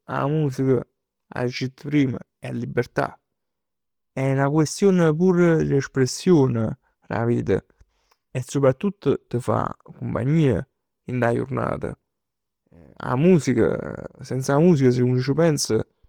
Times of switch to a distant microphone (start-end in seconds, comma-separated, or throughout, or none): none